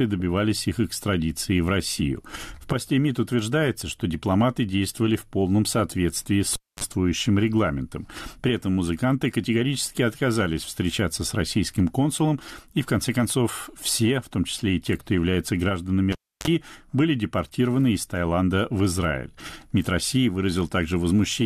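At 3.81 s, just before "что дипломаты действовали в", damaged data in the compressed stream makes the decoder misread a frame and lose sync while it hunts for the next header. The result is a brief glitch.

At 6.53 s, after "в полном соответствии с", and at 16.12 s, between "те кто является гражданами" and "были депортированы из", the cable is pulled and plugged in. A pop is followed by about 0.26 s and then about 0.30 s of near silence. As the plug tip touches, roughly 40 ms of 50 Hz mains buzz sounds, and a second pop brings the sound back.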